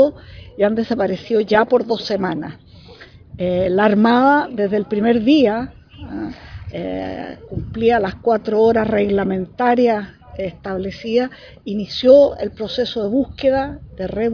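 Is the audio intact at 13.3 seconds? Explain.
Yes, the audio is intact at 13.3 seconds, with no dropout, glitch or other fault at that moment.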